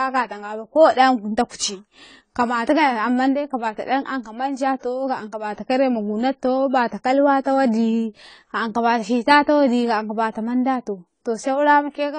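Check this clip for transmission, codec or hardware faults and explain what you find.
Two codec faults are audible: plainly audible lossy coding throughout, and one pre-echo.

Throughout, the speech has nothing above 10 kHz and sounds plainly dull and smeared, with a warbling, fizzy texture on sibilants. The likely cause is AAC compression squeezing the spectrum into too few bits, which fits AAC-LC at a low bitrate around 24 kbps.

At 1.56 to 1.60 s there is a pre-echo. The codec spreads its quantisation noise across a whole transform block, so noise sized for a sharp attack also fills the quiet just before it. The result is a short hiss about 37 ms ahead of a softened onset.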